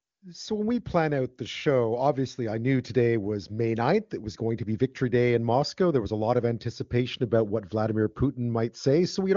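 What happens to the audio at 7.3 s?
Nothing goes wrong at 7.3 s: the speech carries on intact through the AMR wideband (HD Voice) codec, with no dropout, glitch or distortion at that point.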